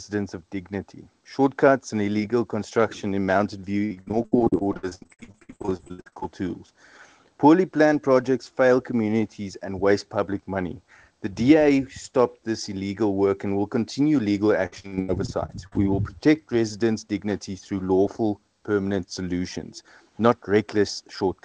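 Repeated packet loss (robotic sound) runs from 3.86 to 6.26 s and again from 14.66 to 15.77 s. Audio packets went missing in rapid succession, and each hole was covered by extending the last sound received. Roughly 44% of the first stretch is patched this way, with gaps up to 67 ms, so it turns choppy. The second stretch is lighter, about 30% concealed. Nothing sits above 8 kHz, which fits a G.722 call path.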